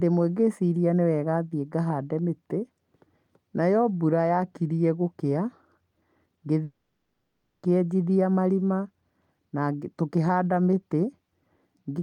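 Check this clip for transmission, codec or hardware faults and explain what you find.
One fault stands out. From 6.63 to 7.68 s the speech breaks off in a long network dropout, likely from packets lost in transit. For about one second the receiver fills the gap by stretching the last sound into a fading buzz or hiss, and the speech then resumes with that second of material missing. On a spectrogram the fill appears as smeared, repeating horizontal bands that weaken over time. In the waveform it shows as a tapering envelope that never drops to full silence before normal speech returns.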